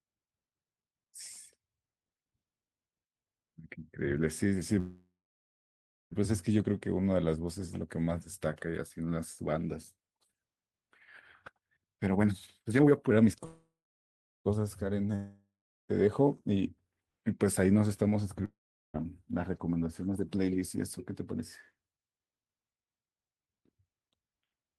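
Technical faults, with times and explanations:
4.79–6.13 s and 13.45–14.47 s, call audio freeze: At each point the sound stalls. The last moment is stretched into a buzzy tail that fades, and then there is silence, about 0.96 s of it in the first freeze and 0.73 s in the second. Playback then resumes exactly where it stopped. Nothing is lost, but 1.32 s and 1.00 s of delay are added, which fits packets that were likely held up until the buffer ran dry. On a spectrogram the last harmonics smear sideways and decay into a blank band. On the waveform a decaying stretch gives way to a flat line.
11.53–13.28 s, jitter buffer speed-up: Speech here runs at about 151% of normal rate with its pitch unchanged, so it sounds hurried. Roughly a second of audio disappears as the receiver trims many small pitch-period slices in succession to drain excess buffered delay, probably after late packets arrived in a clump. 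On a spectrogram the syllables are compressed horizontally while the harmonic spacing holds steady. The waveform shows tightly packed cycles with no gaps.
15.15–15.91 s and 18.45–18.96 s, long network dropout: In both spots the sound continues as a fading buzz. Silence follows, about 0.38 s and 0.39 s respectively. Speech then returns further along, with about 0.74 s and 0.50 s of content gone for good. This fits packets that likely never arrived, with concealment covering the hole. A spectrogram shows a smeared decaying tail, an empty gap, and a hard restart. The waveform shows a shrinking envelope, a flat line, and an abrupt onset.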